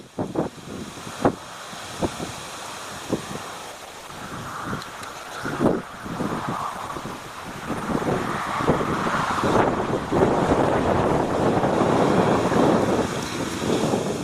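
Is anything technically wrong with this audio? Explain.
Yes. An adaptive stream at a lower bitrate runs from 3.72 to 11.73 s: for about 8 s the player switched to a leaner encoding, likely because the connection slowed. The quality abruptly drops with more codec artefacts, pointing to a drop from roughly 64 to 16 kbit/s Opus, then recovers without any gap.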